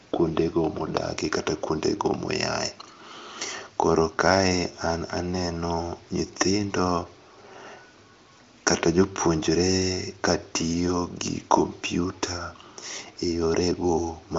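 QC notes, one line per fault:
No faults to log. The speech carries the narrowed band of an AMR wideband (HD Voice) codec, with nothing above 7.5 kHz, and its faint or absent coding roughness fits the high rate of about 23 kbit/s.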